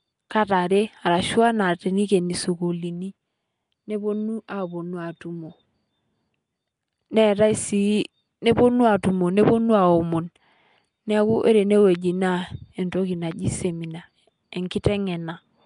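Throughout the speech, a rough, hissy halo clings to every syllable, and the sound smears as if underwater. Nothing reaches above 10.6 kHz. The likely cause is Nellymoser compression, Flash's old codec, which starves weak bands and fills them with noise. The damage fits roughly 44 kbps.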